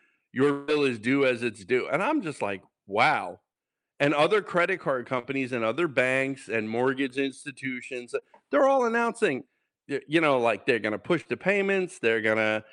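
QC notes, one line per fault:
0.51–0.70 s, long network dropout: About 0.16 s of sound is replaced by a fading continuation of the preceding sound, then resumes at "is due as it's". This is likely a network dropout.
3.52–3.57 s, 5.19–5.25 s, 8.19–8.23 s, 11.21–11.27 s, short concealed packet loss: Gaps of 20–40 ms were filled by extending the preceding sound and blending back, giving brief smears. Two of these fall after "other credit card" and after "like they're going to".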